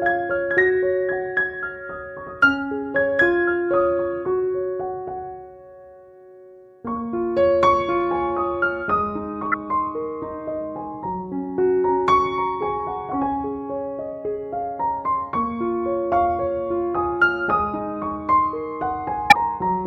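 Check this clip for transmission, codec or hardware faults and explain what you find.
Two brief codec faults are present. Corrupt frame decoded at 9.52–9.54 s and 19.30–19.35 s: damaged compressed frames decoded anyway, throwing energy to wrong frequencies as chirpy noise bursts, the second near full scale, visible as stray vertical smears on a spectrogram.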